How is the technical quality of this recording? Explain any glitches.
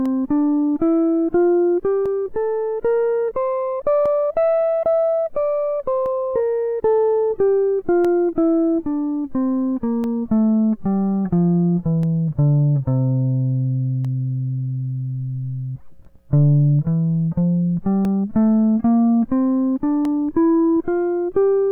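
The recording has one recurring fault, periodic USB or driver dropouts, heard as regular clicks in the music. From 0.06 s to 20.05 s, about ten dropouts recur every 2.0 s. Each time, a stalled bus or driver loses around a millisecond of audio, replaced by silence, giving a sharp tick. A waveform shows tiny flat gaps, and a spectrogram shows evenly spaced thin vertical broadband lines.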